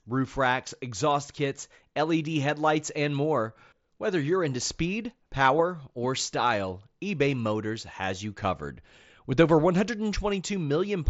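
No technical faults can be heard in this speech recording.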